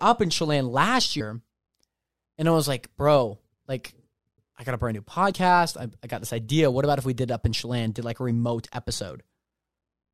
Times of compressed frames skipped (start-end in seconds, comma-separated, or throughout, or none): 1.19, 5.31